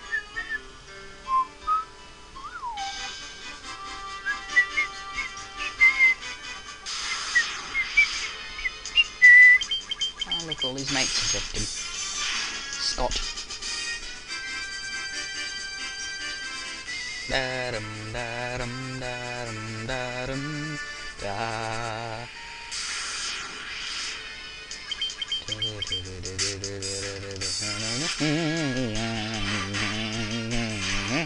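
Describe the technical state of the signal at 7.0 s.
At 7.0 s the signal is intact, with no dropout, distortion, glitch or other fault audible at that moment.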